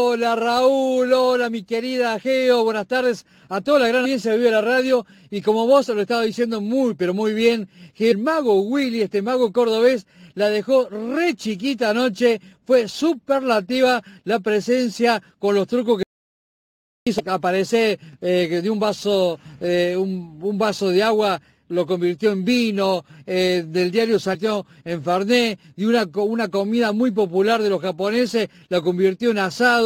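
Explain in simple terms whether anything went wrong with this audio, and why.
A few things went wrong here. First, there's damaged data in the compressed stream, heard as brief chirps or blips at 4.04 s, from 8.11 to 8.13 s, from 17.19 to 17.21 s, and at 24.34 s. Each time, a bit of the compressed file was corrupted, so the player couldn't read those frames properly. It lost its place for a moment and had to hunt for the next clean frame, which makes that quick squawk.

There's also an audio dropout to silence from 16.03 to 17.07 s, so about one second of sound is simply gone. The gap is dead silent, with no background hiss or room sound at all, which tells you the recording kept running but wasn't getting any input. The likely cause is the input briefly dropping, such as a loose connection, a failed link or an accidental mute, with the recorder writing silence until the sound came back.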